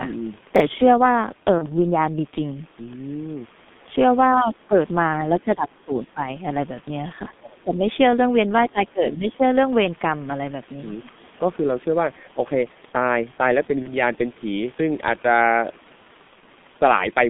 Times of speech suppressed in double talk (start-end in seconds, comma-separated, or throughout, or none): 5.37-6.23, 7.39-7.83, 8.72-9.42